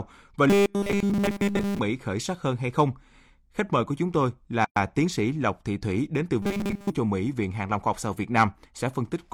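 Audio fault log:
0.50–1.80 s and 6.42–6.90 s: robotic sound from repeated short buffers. The speech turns into a rigid metallic buzz at 200 Hz. A 5 ms stretch is repeated in place of fresh audio, which fits a likely buffer underrun. The first run is almost entirely repeats. The second is about two thirds repeats.
4.65–4.76 s: gap at a join of encoded pieces. A gap of 116 ms cuts into the continuous speech. Its edges are smeared. Separately encoded pieces were joined with their start delay and end padding left in. The speech then resumes where it stopped.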